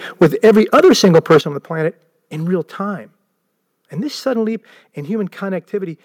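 From 0.21 to 1.38 s the speech has a harsh, crackling edge on its loudest syllables. This is microphone overload: the peaks push about 8 dB past the converter's ceiling and have their tops sliced flat, with roughly a tenth of the samples clipped. The likely cause is an input volume set too high. Unlike codec distortion, the roughness tracks loudness, appearing only on peaks and vanishing in quieter stretches.

At 0.23 s, during that overload, the microphone volume is stepped down by about 2 dB, likely the call software reacting to the clipping. At 1.41 s, just after the distorted stretch ends, comes a much larger step of about 9 dB, and at 5.58 s another of about 2 dB. In each case voice and background fall together, instantly, and stay down. That sets these apart from a talker moving away or a gradual gain ride, which would change more smoothly.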